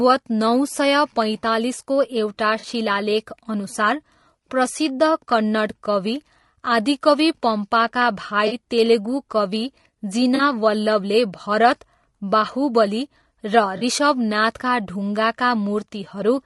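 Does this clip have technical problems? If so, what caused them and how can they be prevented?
Yes. Throughout the speech the sound is rough and grainy, with noise between the harmonics and a dull, synthetic top band. This is likely low-delay AAC compression (AAC-ELD), whose short frames at what sounds like about 32 kbps resolve pitch poorly. A higher bitrate would prevent it.

There are also four brief smeared, noisy patches, each about 40 ms long: at 2.59 to 2.65 s after "पैँतालिसको एउटा", 8.47 to 8.53 s between "आदिकवि पम्पाका" and "तेलुगु कवि", 10.35 to 10.41 s, and 13.77 to 13.83 s. This is AAC frame loss with concealment: the decoder filled each gap from the last good spectrum. Forward error correction or a larger jitter buffer would prevent it.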